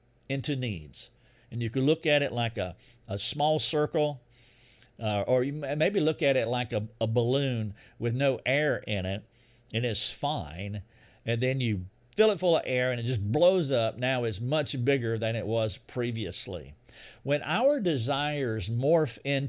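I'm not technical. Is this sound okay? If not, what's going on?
Yes, this recording is technically sound, with nothing in it that needs fixing.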